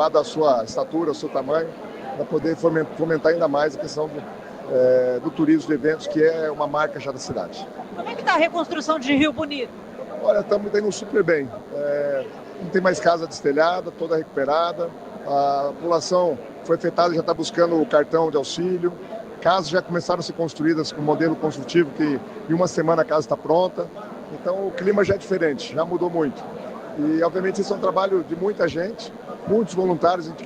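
Throughout, there's DECT cordless phone buzz: a nearby handset or base fires radio bursts 100 times a second, the audio circuit rectifies them, and you get a thin, harmonic-rich buzz sitting well down under the sound.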